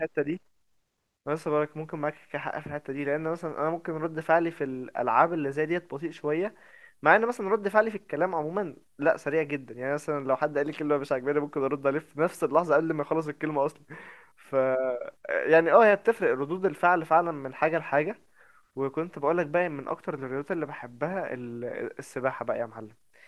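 Listening through the speech recording, nothing stood out as a technical fault at any point.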